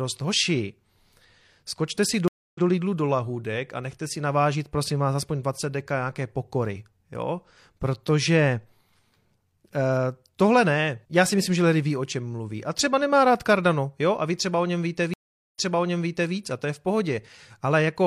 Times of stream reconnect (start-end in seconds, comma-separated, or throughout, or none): 2.28-2.64, 15.14-16.33